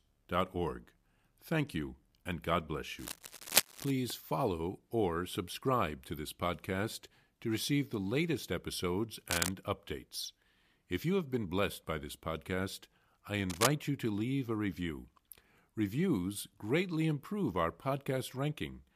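Cable scratch noise shows up three times in this speech: 2.98 to 3.91 s, right before "follow or subscribe to"; 9.30 to 9.49 s, after "receive the latest episodes"; and 13.49 to 13.71 s, between "by this podcast I" and "you to leave a". Each is a rough, uneven rustle about as loud as the voice, likely from a worn cable or connector being moved.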